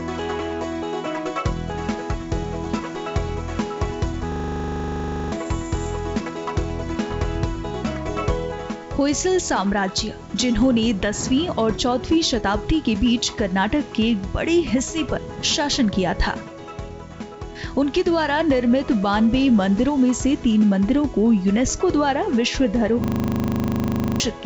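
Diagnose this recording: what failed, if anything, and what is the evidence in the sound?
The pacing is slightly unsteady all the way through, with small hiccups at uneven intervals. This is clock drift between sender and receiver at the network and buffer stage: the sending clock runs roughly 4 percent fast, so the jitter buffer keeps overfilling and must shed audio.

From 0.17 s to 24.4 s the tempo has faint skips and lurches, all in the same direction. These are repeated timing corrections in call processing. The receiver trims short pieces to consume audio at about 104 percent of its own rate and stay in step.

At 4.32 to 5.32 s and again at 23.04 to 24.2 s, the sound turns into a steady 25 Hz buzz. This is a system hang loop at the driver or buffer stage. A 40 ms slice of audio repeats exactly, 25 and then 29 times, and about a second of real audio is lost each time. The call path's G.722 coding, with nothing above 8 kHz, is heard underneath.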